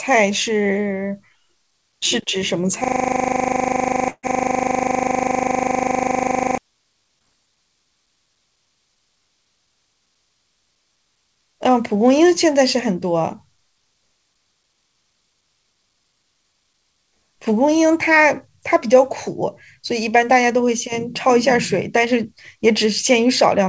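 From 2.84 to 6.58 s a system hang loop takes over: one 40 ms fragment repeats about 94 times while the driver is frozen, producing a rigid buzz at 25 Hz. On a waveform it looks like identical tiles. On a spectrogram it appears as evenly spaced vertical bands with harmonics every 25 Hz.

Within that stretch, from 4.10 to 4.25 s, a burst of packet loss removes about 140 ms of audio. The receiver spends about 130 ms extending and fading the last sound, then about 50 ms of silence follows. The spectrogram shows a smeared continuation followed by a blank gap.

From 7.19 to 7.24 s a short concealed packet loss leaves a brief smear where 20 ms of audio went missing and about 14 ms was filled with synthesized continuation, stretching that moment by roughly 15 ms. A waveform shows a slightly stretched section. On the spectrogram, the detail blurs briefly below the 8 kHz ceiling of the G.722 call path.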